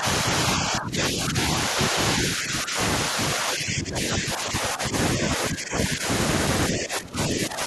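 Speech suppressed in double talk occurs at 0.00–0.05, 0.57–1.37, 1.70–1.96, 2.22–2.78, 3.10–3.17, 3.35–4.94, 5.17–6.08 and 6.70–7.67 s. Within these stretches the speech sinks in level, by roughly 5 to 15 dB at its deepest, and sounds pushed back or partly gated. The likely cause is an echo canceller that, with both ends talking at once, mistook this talker for loudspeaker echo and attenuated it along with the echo.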